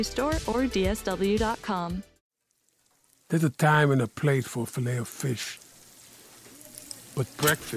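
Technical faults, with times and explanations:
No technical faults can be heard in this audio. Nothing in it needs a time or an explanation.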